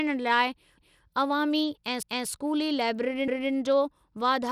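The speech runs through a coarse sub-band coder for its whole length, most likely Bluetooth SBC compression at a low bit pool. Everything above 17.2 kHz is gone, the remaining treble is thin and unsteady, and a plainly audible grit rides on the voice, which fits a bitrate near 96 kbps.

The audio was also processed in roughly one-second chunks, each starting a quarter second before the previous one ended. These overlapping chunks make 250 ms of speech play twice at about 0.78, 2.03 and 3.28 s (the last just after "ऐं स्कूली"), heard as a regular stutter.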